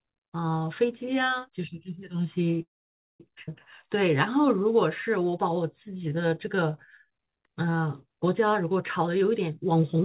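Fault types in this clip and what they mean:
call audio freeze, 2.62 to 3.21 s: packets were likely held up in transit, so the jitter buffer ran dry and the receiver bridged about 0.58 s. A brief carried-over buzz quickly gives way to roughly 0.52 s of silence, then the sound resumes with nothing lost.
skip ahead, 3.47 s: with later audio already queued, a stretch of roughly a third of a second was dropped and the two sides were joined almost directly. The sound jumps forward abruptly, and that portion is simply gone.
jitter buffer slow-down, 3.86 to 7.64 s: to rebuild its reserve, the buffer repeated single pitch periods and pause fragments again and again, adding 309 ms in total. The audio plays at 92% speed with unchanged pitch, so sounds are drawn out.
jitter buffer speed-up, 8.98 to 10.03 s: holding more audio than its target, the buffer trimmed short runs of pitch periods back to back, removing roughly 0.3 s. 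The sound runs at 128% speed with pitch held steady and comes across as hurried.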